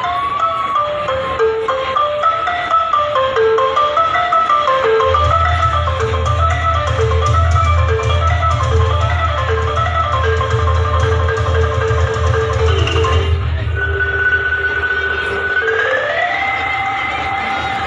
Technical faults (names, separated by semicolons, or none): none